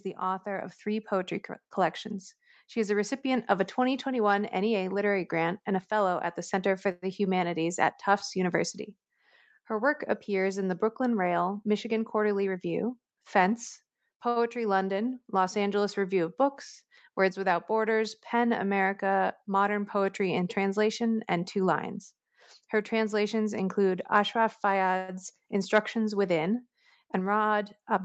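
Automatic gain rising runs from 0.43 to 3.77 s. The gain control judged the incoming speech too quiet and raised its level step by step, by about 5 dB over those three seconds. The voice and the background noise behind it swell together rather than the talker getting louder alone.

A call audio freeze follows at 6.91 to 7.05 s. The last sound is drawn out for 108 ms as a buzzy continuation that fades, without dropping to silence, and then the speech resumes exactly where it stopped. The likely cause is packets held up in transit, which emptied the jitter buffer so the receiver had to fill the wait. Nothing is lost, but the gap pushes everything after it 108 ms later. The same thing happens at 24.97 to 25.11 s, this time filling 112 ms.

Jitter buffer speed-up occurs at 11.92 to 12.90 s. After the delay built up, the buffer held more audio than it wanted, so the receiver trimmed many short slices of a pitch period or so, about a tenth of a second in total. 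The speech plays roughly 11% fast at unchanged pitch and sounds hurried. A second speed-up at 21.59 to 22.21 s runs about 9% fast, removing around 70 ms.

A short stall from a late packet comes at 14.29 to 14.39 s. One packet was not there when it was due, so the receiver stretched the current sound for 71 ms until it arrived and then carried on from the same point. No speech is missing, but that sound is held unnaturally long with a faint buzzy dip.

Throughout, the call path's Opus coding, pointing to a rate near 40 kbps, limits the audio to 8 kHz and adds its usual coding noise.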